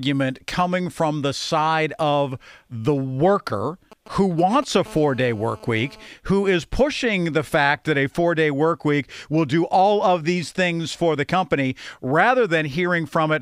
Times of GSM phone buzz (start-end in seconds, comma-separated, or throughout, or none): 4.88-6.07